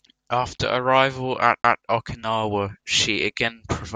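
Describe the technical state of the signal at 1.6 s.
At 1.62 to 1.64 s the speech has a CD skip: a knock or surface flaw threw the laser onto a different turn of the disc's spiral, so the player briefly muted and resumed elsewhere in the recording. It is heard as a tick and an abrupt jump in the speech. On the waveform this is a flat, near-silent gap of about 20 ms with hard edges. On a spectrogram it is a thin vertical dropout with a broadband click at each edge, and the frequency patterns on either side do not line up.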